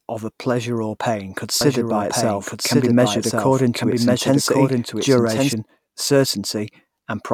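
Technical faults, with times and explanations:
1.61 to 5.53 s, doubled audio track: a second copy of the speech runs about a second behind the original, a few dB quieter, with no reverb tail, and it cuts in and out abruptly, most likely a slower capture path or a misaligned edit stacking the audio twice.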